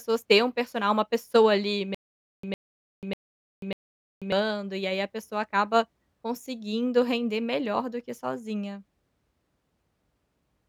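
From 1.95 to 4.32 s, a 106 ms burst repeats four times with 489 ms of silence between: stutter with silent gaps, likely a stalled stream replaying its last fragment.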